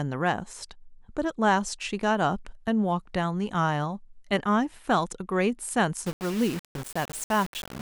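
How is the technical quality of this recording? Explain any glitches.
The main problem sits at the end. From 6.06 s to the close at 7.81 s, the speech turns grainy and gritty, with a rough distortion that tracks the voice and sits only about 15 dB below it. That's likely low bit depth without dither: rounding to roughly 5 bits leaves an error that follows the signal, so quieter moments sputter or break up.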